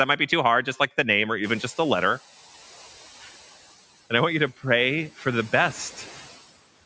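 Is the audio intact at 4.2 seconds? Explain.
Yes, the speech at 4.2 seconds is intact, with no fault at that moment.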